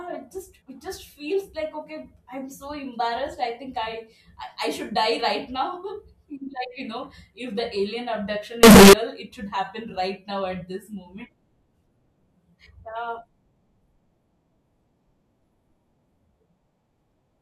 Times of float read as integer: 8.63-8.93

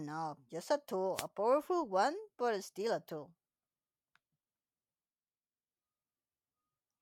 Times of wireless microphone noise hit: 1.14-1.27

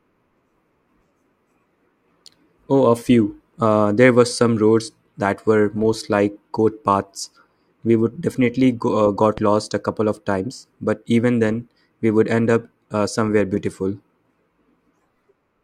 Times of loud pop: 9.38-9.40

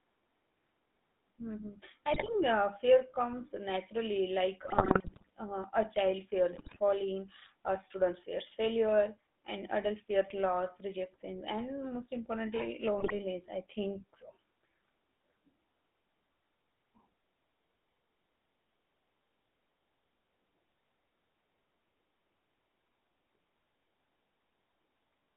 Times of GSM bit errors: 2.14-2.35, 4.64-5.30, 6.52-6.79, 12.98-13.13

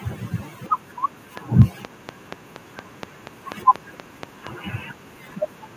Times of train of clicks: 1.37-4.48

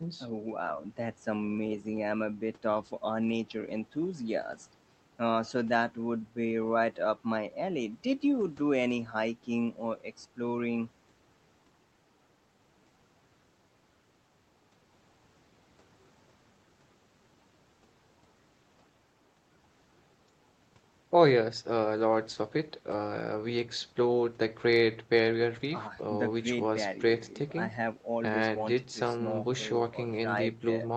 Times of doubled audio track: none

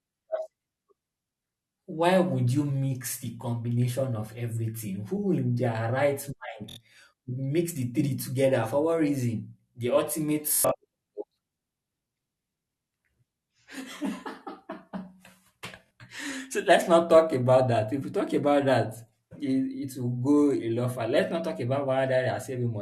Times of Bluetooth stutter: 6.70-6.77, 10.48-10.71, 15.86-15.91

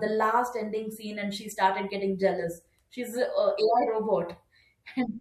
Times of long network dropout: none

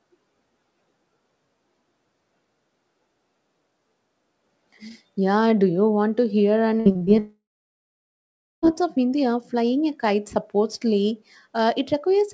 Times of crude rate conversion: none

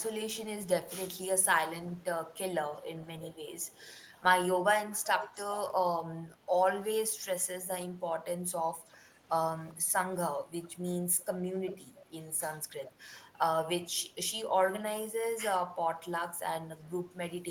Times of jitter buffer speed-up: none

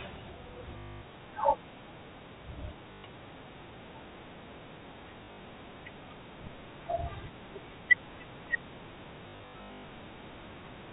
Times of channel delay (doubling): none

